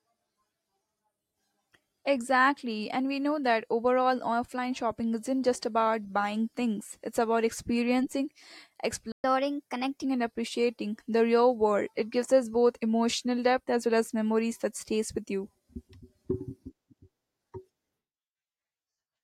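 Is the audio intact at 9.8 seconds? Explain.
No. A catch-up at higher speed runs from 9.24 to 10.04 s, so 9.8 s falls inside it. After a stall the player plays its backlog faster by resampling, here at 1.15 times normal speed. Because resampling shifts tempo and pitch together, the speech sounds hurried and raised by about two semitones for that stretch. It then settles back to normal speed and pitch just before "and appreciating the real".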